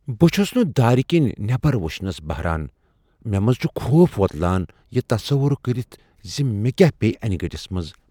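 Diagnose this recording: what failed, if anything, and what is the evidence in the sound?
Nothing failed, and the sound gives no evidence of a fault at any stage of the recording.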